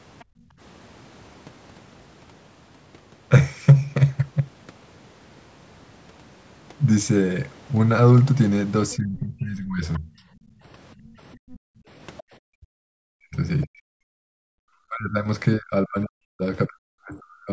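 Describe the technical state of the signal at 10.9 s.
Other side's voice leaking through, from 8.94 s to 13.67 s, is present at 10.9 s: a second voice sits faintly under the talker, roughly 25 dB down. The likely cause is that the far end, played on the talker's loudspeaker, re-entered the microphone and the echo canceller left a residue of it. At this level it is quiet.

Speech suppressed in double talk runs from 8.96 s to 17.5 s and also covers this moment. The talker's voice dips, thins out and breaks into pieces, with the deepest losses around 40 dB and about four seconds affected in total across the span. Both sides were likely talking at once, and the canceller could not tell the local voice from the loudspeaker echo, so it turned everything down together.

Background gated by the echo canceller, from 10.47 s to 11.88 s, takes the room sound away around 10.9 s, with drops of about 40 dB and well under a second affected in total. 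While the loudspeaker was active, the canceller clamped the microphone hard, and the ambience falls to near silence before returning once the canceller releases. Above all this, the band stops at 8 kHz, which is expected from the call's microphone processing.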